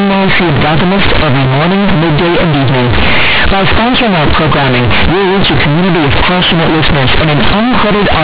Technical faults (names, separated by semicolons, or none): companded audio read as linear